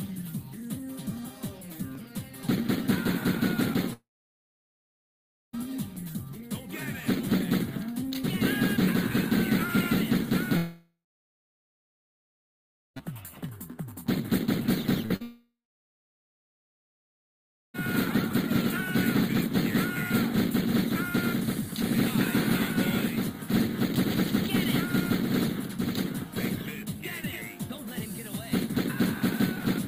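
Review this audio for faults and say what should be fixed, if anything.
Dropped samples give single sharp clicks at 1.95, 3.47, 5.96, 13.49, 22.04 and 24.66 s. Each is a jump in the waveform where less than a millisecond of audio is missing. That is far too little to lose any sound. Each one shows as a thin vertical line across the spectrum. The likely cause is a capture or playback path skipping samples under load. Larger buffers and a steady clock between devices would prevent it.

Long network dropouts take out three stretches: 3.93 to 5.55 s, 10.57 to 13.03 s, and 15.22 to 17.76 s. In each, the last sound carries on briefly as a fading buzz. Then it falls to silence for about 1.5 s, 2.0 s and 2.2 s in turn. About 1.6 s, 2.4 s and 2.5 s of audio are lost. The sound resumes without them. The likely cause is the connection stalling. A more stable network link, or a larger jitter buffer for brief stalls, would prevent this.

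Short concealed packet loss appears at 15.06 to 15.12 s and again at 15.16 to 15.22 s. Each gap is 40 ms. The receiver fills it by extending the preceding sound and then blending back. This is heard as a quick smear or wobble. The second one runs straight into the third dropout. Forward error correction or a slightly deeper jitter buffer would help prevent it.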